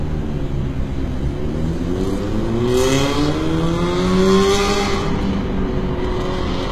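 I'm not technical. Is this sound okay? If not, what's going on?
No. Throughout, there's HE-AAC compression damage, clearly audible: the top end is likely rebuilt from lower tones, so the treble sounds gritty and metallic, with nothing above 14.9 kHz.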